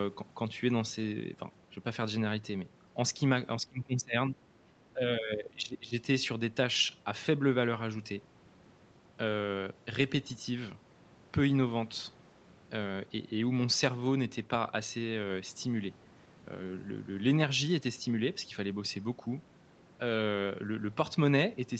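Speech, carried over a call link with audio topping out near 8 kHz. The voice sinks from 3.6 to 4.39 s, by about 20 dB, then again from 4.93 to 5.95 s, by about 15 dB. These dips are speech suppressed in double talk, likely from the echo canceller ducking the voice along with the loudspeaker echo.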